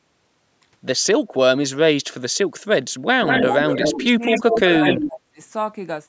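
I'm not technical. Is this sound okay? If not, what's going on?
No. When both people spoke at once, the call's echo canceller likely mistook this voice for echo and turned it down: speech suppressed in double talk. The voice dips or partly cuts out at 3.16 s, 3.42 to 3.58 s, 3.92 to 4.25 s and 4.41 to 5.4 s.

There is also an echo leak. The other side's speakerphone likely failed to remove all of the loudspeaker sound from its microphone and sent it back. From 3.26 to 4.07 s and 4.24 to 5.01 s, a second copy of the voice follows about a fifth of a second behind, nearly as loud as the original.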